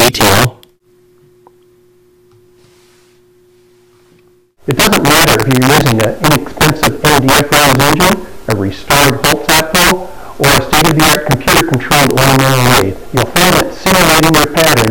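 Integer overflow runs through the whole clip: the signal is driven about 9 dB past the integer ceiling, and instead of being held at full scale, each peak that crosses it wraps around to the opposite extreme. Roughly 7 percent of samples go over, so the loud parts of the sound break into harsh, violent cracks far sharper than ordinary clipping. On a waveform, those peaks jump instantly from top rail to bottom rail. A spectrogram shows them as bright broadband vertical streaks.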